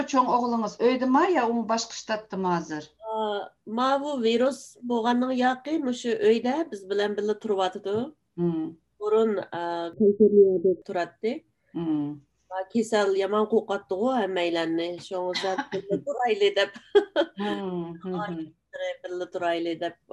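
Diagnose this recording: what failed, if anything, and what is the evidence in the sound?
At 17.54 s the whole signal drops abruptly by about 5 dB, the background noise floor falling in step with the foreground sound, and at 18.76 s it snaps back up just as suddenly. That is a sudden gain jump. Because noise and signal move together with no fade, the change happened after the sound was captured, most likely a digital gain setting in the processing chain applied from one sample to the next without a ramp, then reverted.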